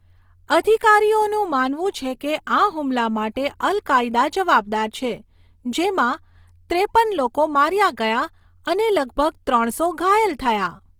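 From start to finish the speech carries a grainy, rough texture, the sign of Opus compression in its music mode, likely at a rate around 24 kbps. The encoder keeps each band's energy but fills starved bands with noise or folded copies of lower ones, so the content reaches about 20.2 kHz and has few of the swirling, watery holes that mark MP3 damage.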